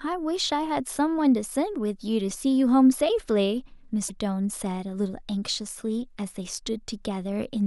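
Damaged data in the compressed stream at 4.06 to 4.11 s: corrupted bytes make the decoder lose frame sync and resynchronise, producing a brief chirp, squawk, click or short hole in the speech.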